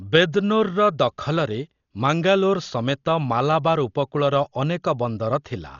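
Speech throughout, dull and band-limited with nothing above 7 kHz, and rough, fluttering noise around voiced tones, heavy damage that is likely Dolby Digital compression at a very low bitrate near 40 kbps.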